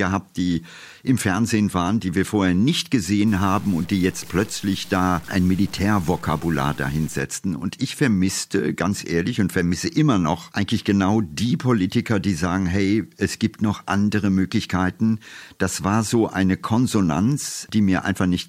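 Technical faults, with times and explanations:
3.28 to 7.19 s, low bit depth without dither: right after "die wir vorher nicht" the speech turns grainy, with a rough distortion that moves with the voice. Quiet parts sputter or drop out. This is likely truncation to 6 bits, leaving error only about 25 dB below the signal.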